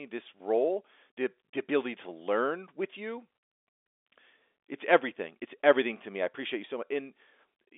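No faults present; the speech sits on a G.711 mu-law telephone path at 64 kbps, band-limited to roughly 300 Hz to 3.6 kHz with nothing above about 3.7 kHz.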